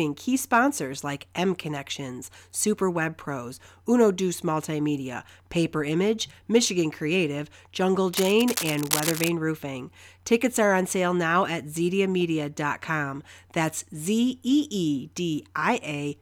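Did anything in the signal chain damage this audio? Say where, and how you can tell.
Yes: cable scratch noise from 8.13 to 9.29 s. Uneven rustling bursts, nearly as loud as the speech, likely come from a worn analogue cable's fluctuating contact resistance.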